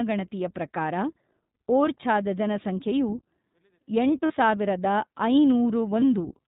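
The whole clip carries iLBC codec coding. Nothing passes above 4 kHz, and the speech sounds plainly rough and synthetic, which fits the 15.2 kbps, 20 ms frame mode.

Lost iLBC frames occur from 4.26 to 4.32 s and from 6.00 to 6.03 s. The decoder fills each gap with a repeated pitch cycle mixed with noise, so it sounds like a brief buzzy held vowel. The first gap is 40 ms, which fits two missing frames, and the second is 20 ms. Normal speech returns almost at once.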